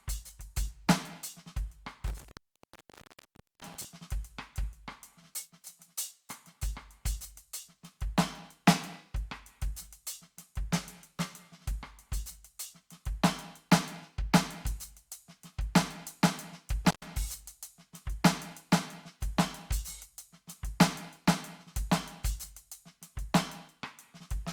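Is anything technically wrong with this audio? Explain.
Yes: intermittent contact. A loose cable or plug briefly opens, so the music drops out, with crackle at each edge and faint hiss in the gap, from 2.07 to 3.85 s and again from 16.85 to 17.03 s.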